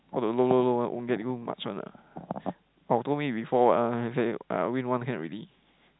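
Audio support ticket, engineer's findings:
No faults found: the speech is carried as G.711 A-law telephone audio, band-limited to about 3.9 kHz, with at most faint quantisation noise following the signal level.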